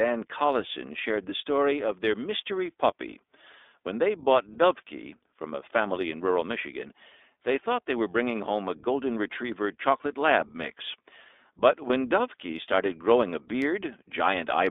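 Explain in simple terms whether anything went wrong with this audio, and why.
Yes, two things went wrong. The whole recording passed through the iLBC codec, a phone-style speech compressor. It keeps only the range from about 250 Hz to 3.6 kHz, so the speech sounds thin and muffled, with a noticeably rough, synthetic edge.

There are also two moments of lost iLBC frames, at 4.54 to 4.56 s and 11.88 to 11.91 s. Each time, about 20 ms of audio went missing, and the decoder filled the gap by repeating the last bit of sound, heard as a brief buzzy hold before normal speech resumes.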